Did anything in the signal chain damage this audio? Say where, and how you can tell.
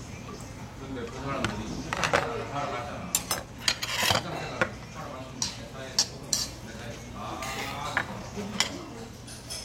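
No, nothing in the signal chain stood out as damaging this audio on listening.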